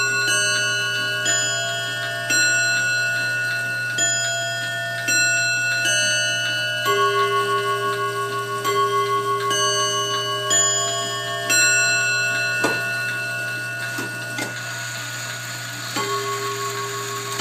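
No technical faults can be heard anywhere in this audio.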